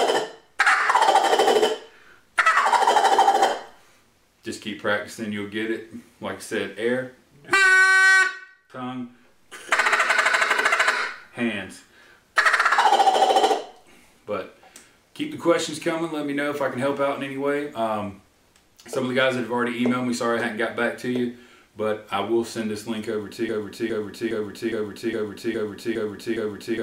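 From 23.49 s to the end, a broken-record loop repeats one 0.41 s fragment exactly eight times, replacing the intended audio; likely a stalled stream resending its last fragment.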